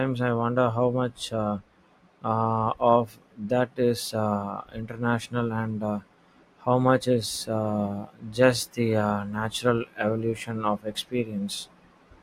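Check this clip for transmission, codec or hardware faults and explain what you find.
One fault stands out in this speech clip. From 5.25 to 5.28 s there is DAB burbling, short blips of noise lasting a handful of frames. Bit errors of under about a tenth of a percent slip past error correction and put noise blips into single sub-bands. Unlike a dropout, the sound never goes silent.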